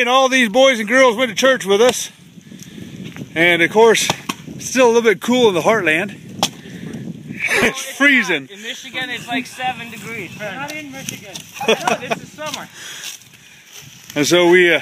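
Processor overload crackle runs from 7.42 to 7.73 s. Across those three tenths of a second the processor falls behind and misses a handful of its buffer deadlines, which points to buffers of roughly 5 ms each. Each time a buffer isn't ready, a stale piece of earlier audio is played in its place, and its hard edges click. The clicks cluster into a short gritty tearing on top of the sound, then stop once the load eases.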